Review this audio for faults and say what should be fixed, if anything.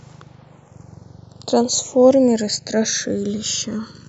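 Channels drifting apart throughout: the two channels run on separate clocks, roughly 150 ppm apart, so their offset grows to under a millisecond by the end. Summed to mono, comb notches sweep slowly through the speech as a gradual flanging swirl. Locking both devices to one shared clock would prevent it.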